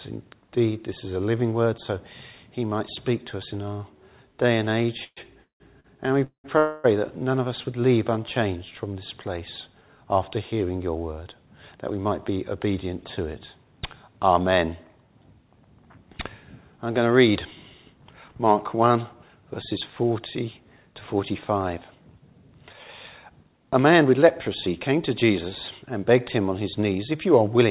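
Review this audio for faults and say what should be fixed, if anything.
Between 5.04 and 6.46 s, packets kept arriving late, so the jitter buffer ran dry four times. That produced repeated stalls (stutter): the receiver stretched the last sound across about 0.54 s of gaps, the longest 196 ms. Concealment fills 38% of that span and nothing is lost, but the sound drags and stutters.

From 6.58 to 6.86 s, a call audio freeze follows. The likely cause is packets held up in transit, which emptied the buffer and added 260 ms of delay. The receiver filled that whole stretch by continuing the last sound, with no silence, and then resumed where it had stopped.

Once delayed packets arrived together, the buffer held more audio than its target and trimmed the excess by cutting out short pitch-period slices. These jitter buffer speed-ups run at 108% from 11.39 to 12.67 s, 109% from 18.09 to 19.30 s, and 106% from 23.29 to 27.27 s. 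Each removes roughly a tenth, a tenth and a third of a second respectively. The pitch stays the same, but the sound comes across as hurried. Over the whole clip, the G.711 call path shows its usual band limit, with nothing above 4 kHz.

To fix it, stabilise the network route or give the jitter buffer more headroom, so that late packets don't empty it and bursts don't force catch-up compression.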